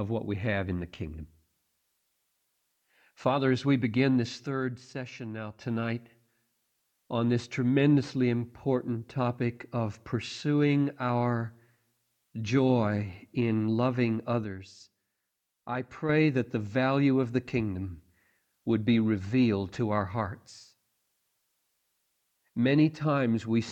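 From 4.47 to 5.61 s and 14.44 to 16.09 s the level drops abruptly by about 6 dB, likely one channel dropping out; unlike a fade, it snaps down and back.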